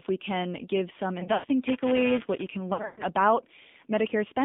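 Speech heard through an AMR narrowband mobile codec at 7.4 kbps: the line is confined to roughly 200 Hz to 3.6 kHz, and the low bitrate gives the voice a plainly audible buzzy, synthetic texture across the whole clip. That texture is constant, unlike the timed faults below. Lost AMR speech frames follow "we can give some" at 1.20 to 1.46 s: about 140 ms of audio is missing, scattered over 240 ms, with the longest gap 100 ms. Then 2.74 to 3.03 s has about 200 ms missing over 240 ms, longest gap 120 ms. The decoder stretches the last good sound and fades it, so you hear smeared, dying syllables rather than clicks. Buffer tearing from 1.67 to 2.47 s adds a steady robotic rattle at 375 Hz, present only under signal, which fits a 128-sample buffer. A tiny slice of each period replays audio a few milliseconds old, giving hard joins that repeat regularly rather than fading away.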